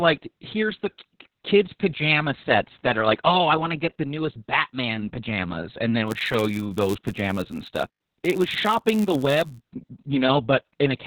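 Throughout, the speech passes through Opus voice compression at 6 kbps in SILK mode, narrowband with 60 ms frames. The band stops near 4 kHz and the excitation is coarsely coded, so the damage is heavy: muffled, hoarse and somewhat robotic speech.

From 6.06 s to 9.60 s, right after "pajamas and then", a padded block size mismatch appears. Each block arrives short and the remainder is zero-filled, inserting a gap every block. That produces a buzz near 99.6 Hz and slows playback to 0.996 times normal speed.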